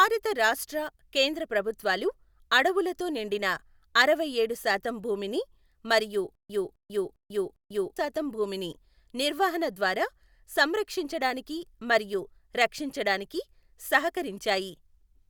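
Playback likely stalled between 6.35 and 7.97 s, and each time it recovered it replayed its last fragment of speech before running dry again. Just after "అరవైఏడు శాతం భూమిని మరియు", a 260 ms burst repeats four times, each followed by about 143 ms of digital silence, giving an even 403 ms stutter with silent gaps. Speech resumes at "శాతం భూమిని నిర్వహణ ద్వారా", and the audio that belonged in that stretch is missing.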